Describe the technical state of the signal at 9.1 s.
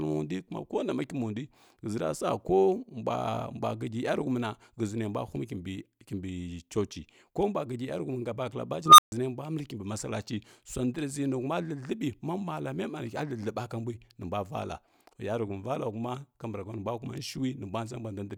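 At 9.1 s the signal is at the tail of an unstable filter event spanning 8.86 to 9.12 s, just after "ga bakala" and before "nembula məli kimbi malachi". A recursive filter's feedback runs away, so a tone of around 1 kHz swells over 0.13 s into clipping, then overflow cuts the output to 0.14 s of silence until the filter resets. Acoustic feedback howl grows more slowly and never ends in this abrupt dead gap.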